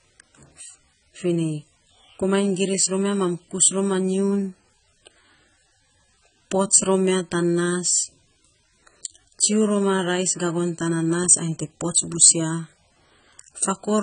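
Throughout the speech, AAC compression, likely at a very low bitrate near 16 kbps, leaves the sound dull and smeared, with fizzy warbling on sibilants. Starved of bits, the coder drops detail: a spectrogram shows nothing above 9.5 kHz.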